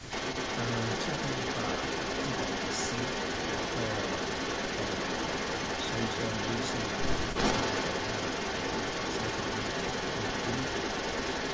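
From the start to 11.5 s, an echo leak is present, likely because a far-end loudspeaker's echo canceller let its microphone pickup return down the line. The speech is trailed by a copy about 0.34 s behind, about 5 dB louder than the original, within the call's 8 kHz bandwidth.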